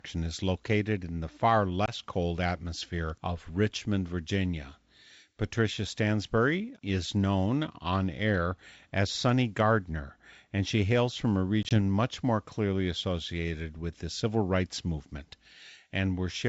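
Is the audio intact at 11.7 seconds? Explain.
No. From 11.63 to 11.73 s there is packet loss on an ADPCM call: about 40 ms is lost in gaps of up to 20 ms spread over 80 ms. The decoder's predictor and step size fall out of step, so hard-edged silences give way to slightly distorted speech.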